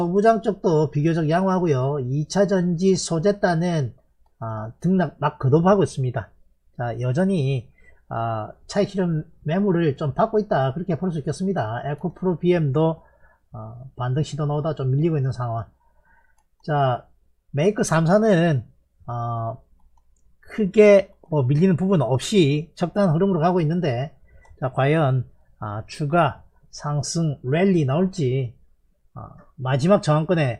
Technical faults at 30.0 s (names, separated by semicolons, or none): none